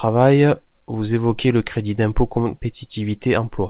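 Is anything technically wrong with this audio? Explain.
No, nothing's wrong here; it's speech that's come over a call line, and the lack of anything above about 4 kHz is just what you'd expect from a G.711 A-law codec doing its normal job.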